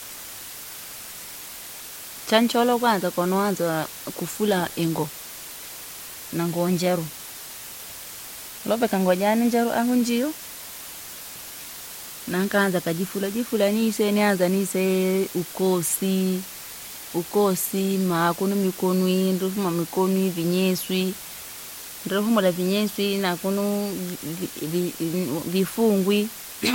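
From the first moment to the last, a steady, even hiss sits under the speech, and it never changes character. That's low bit depth with dither: the audio has been squeezed down to just 6 bits, with a little random noise added before rounding so the error spreads out as flat white noise instead of gritty distortion. The trade-off is a loud noise floor, only roughly 15 dB below the speech, but no crunch at all.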